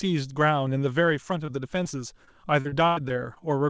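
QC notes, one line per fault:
1.46–1.50 s and 1.84–1.87 s: short concealed packet loss. About 20 ms of speech, consistent with one packet each time, arrived too late for the decoder. The receiver extended the preceding sound across each hole and blended back, leaving a brief smear or wobble.
2.25–3.41 s: repeated packet loss (robotic sound). Six gaps, the longest 94 ms, leave about 18% of this stretch patched by continuing the last sound. New holes arrive before the speech settles, so it turns choppy within the G.722 band, which stops at 8 kHz.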